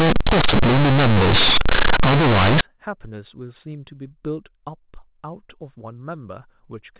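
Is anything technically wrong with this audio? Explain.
Yes. From 0.0 to 2.61 s the speech suffers from companded audio read as linear: mu-law bytes are played as raw 8-bit samples without expansion. Every sign change throws the output across half its range, so quiet passages become as loud as peaks, producing harsh, buzzy distortion and heavy noise in pauses. After that the mu-law telephone coding decodes properly, with its band limit at 4 kHz.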